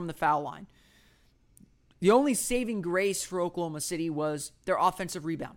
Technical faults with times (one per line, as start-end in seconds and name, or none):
none